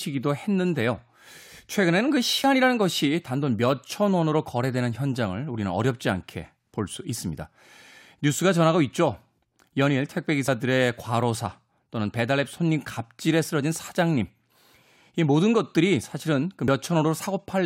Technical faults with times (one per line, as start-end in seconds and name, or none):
2.44 dropped buffer (overrun)
10.48 dropped buffer (overrun)
16.68 dropped buffer (overrun)